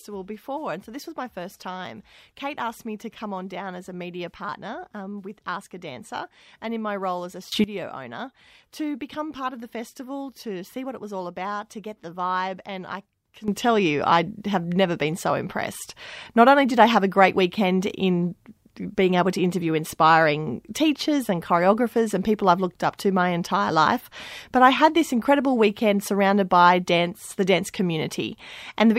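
A sudden gain jump at 7.52 s lifts the speech and its background noise together by about 18 dB, holding only until 7.64 s before dropping back. A second jump at 13.48 s raises both by about 12 dB and stays there to the end. Each step lands abruptly rather than fading in, which likely comes from a digital gain setting being applied in one sample with no ramp to smooth the change.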